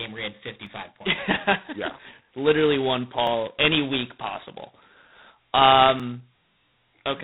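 Speech runs through a harsh, rasping hiss that rises and falls with its level, and nothing above 4 kHz survives. This is heavy G.726 ADPCM damage at 16 kbit/s, where too few bits per sample for the adaptive-prediction difference leave coarse quantisation noise. Three jumps in the sound, with no gap of silence, land at 0.67, 3.27 and 6.00 s. These are likely dropped buffers (overrun): about 10 ms of audio at the first and only a few milliseconds at the others is lost, and the remaining sound is spliced directly together.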